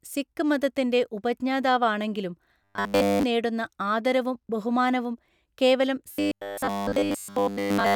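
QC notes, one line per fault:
2.64–3.23 s and 6.12–7.95 s, robotic sound from repeated short buffers: after "സിക്ക് മതത്തിന്റെ ഉപജ്ഞാതാവാണെങ്കിലും" and again after "നേടുന്നആദരവും ബഹുമാനവും കേവലം", speech becomes a rigid metallic 100 Hz buzz, likely from starved playback looping a 10 ms buffer and replacing essentially all incoming audio.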